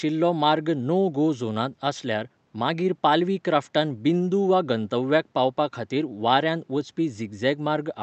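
No technical faults can be heard in this recording. The speech passes through the call path with its high frequencies stopping at 8 kHz and the ordinary coding texture of the codec, over faint room noise about 45 dB below the speech.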